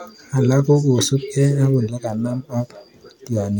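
No technical faults can be heard anywhere in this speech recording. There is nothing to mark at any point in time.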